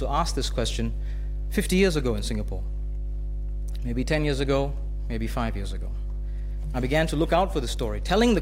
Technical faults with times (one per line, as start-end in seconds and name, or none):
0.00-8.42 mains hum